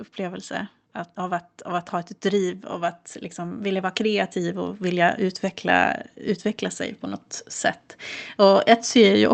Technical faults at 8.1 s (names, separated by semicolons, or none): none